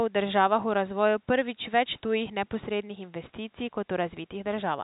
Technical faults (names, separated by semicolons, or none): none